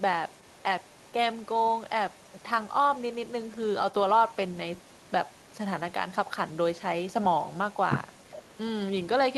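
Echo leak runs from 0.0 to 5.57 s and again from 5.77 s to the end: a faint copy of the speech trails about 0.41 s behind, likely loudspeaker sound the far end's echo canceller failed to remove.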